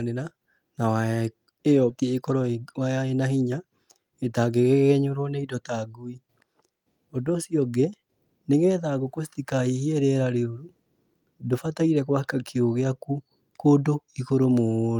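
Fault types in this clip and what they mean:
Skip ahead: at 1.9 s the speech jumps forward, dropping roughly a second of waiting audio and joining both sides with no gap.
Jitter buffer speed-up: from 2.03 to 3.03 s the receiver trims pitch-period slices, about 100 ms in total, so speech runs 9% fast at unchanged pitch.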